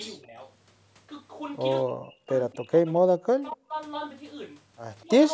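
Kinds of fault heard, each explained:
Speech suppressed in double talk: the talker's level drops sharply in patches, likely because an echo canceller mistook simultaneous far-end speech for echo and pulled both down. Dips run from about 10 dB to about 40 dB, showing as hollowed waveform stretches and faded spectrogram columns near 0.2, 1.9–2.3, 2.5–3.7 and 5.0 s.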